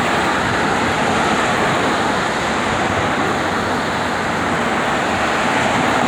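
No technical faults are audible.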